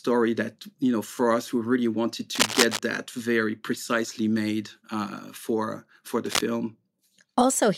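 From 2.35 to 2.79 s, after "us we really wanted", and again from 6.26 to 6.41 s, after "made uh for for", dense scratching bursts sit over the speech at about its level. This cable scratch noise likely comes from a worn connector shifting.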